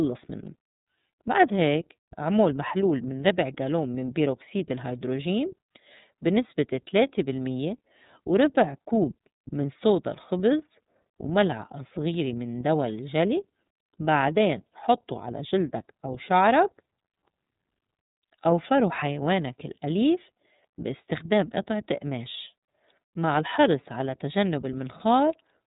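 Throughout the speech, an iLBC codec encodes each 30 ms frame's excitation independently, consistent with the 13.33 kbps mode. Nothing above about 3.8 kHz survives, so the speech sounds narrow and muffled, with a plainly audible rough, synthetic texture.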